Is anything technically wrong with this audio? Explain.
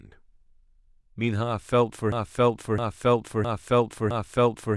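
Yes, there's a broken-record loop. From about 2.12 s right through to the end, the speech stops moving forward and a chunk roughly 0.66 s long plays four times back to back, identical each pass. It sounds like the audio got stuck rather than cut out. The likely cause is a player, encoder or stream stalling and re-sending the last fragment it had buffered, so whatever should have followed after 2.12 s is simply gone.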